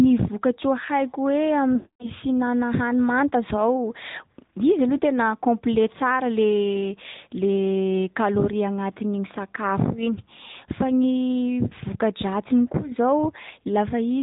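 Speech passes through the AMR narrowband mobile codec, band-limited below 4 kHz with plainly audible buzzy, synthetic coding damage consistent with a mid-rate mode near 10.2 kbps. Lost AMR speech frames occur from 1.76 to 2.08 s, where the decoder stretches the last sound and fades it to silence within 0.1 to 0.2 s of the roughly 240 ms gap, and briefly at 11.68–11.72 s as a short dip.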